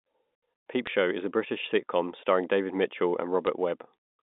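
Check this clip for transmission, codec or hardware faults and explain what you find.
Two brief transmission faults are present. Bit errors on a digital phone line at 0.87 s and 3.47 s: flipped bits corrupt individual samples on the telephone-band G.711 line, leaving the speech otherwise unchanged.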